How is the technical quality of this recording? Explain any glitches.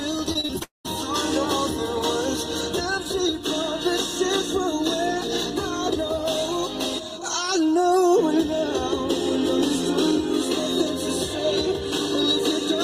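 Two glitches are audible, both in the first second. From 0.33 to 0.89 s there is repeated packet loss (robotic sound). Five short gaps, the longest 33 ms, are each filled by extending the preceding sound, which makes the passage choppy with pieces missing. On a spectrogram this shows as repeated, smeared vertical slices. Within that stretch, from 0.62 to 0.86 s, a long network dropout is the likely cause of a brief buzz or hiss that fades into about 140 ms of silence. The waveform goes flat there before the audio resumes.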